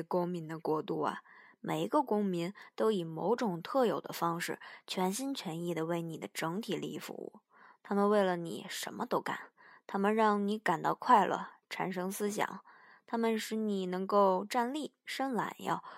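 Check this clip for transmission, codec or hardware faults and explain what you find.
Checking this clip turns up nothing to explain.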